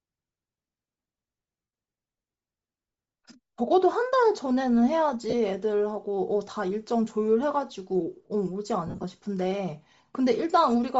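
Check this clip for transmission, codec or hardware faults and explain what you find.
The speech carries two faults: codec damage across the whole clip, and three short dropouts from lost LE Audio frames.

Bluetooth LC3 compression runs throughout. At a low bitrate, the encoder most plausibly ran near 32 kbps with short 7.5 ms frames, so it discards much of the upper spectrum and the decoder refills that region with synthetic noise. This is likely the source of the plainly audible damage. The high end sounds breathy and grainy rather than crisp, and sibilance and detail take on a hissy, artificial texture.

Lost LE Audio frames occur at 1.64 to 1.73 s (about 90 ms), 5.30 to 5.34 s (30 ms), and 8.87 to 9.04 s. In the last case the losses are scattered across about 165 ms, with the longest unbroken run around 40 ms. When frames fail to arrive, the decoder repeats the last spectrum with randomised phase and fades it over successive frames. 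Each gap therefore becomes a brief noisy smear. The 90 ms loss sinks toward silence.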